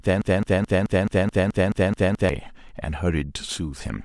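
A broken-record loop running from the start repeats one 215 ms fragment ten times to 2.29 s, likely a stalled stream, showing identical spectrogram blocks.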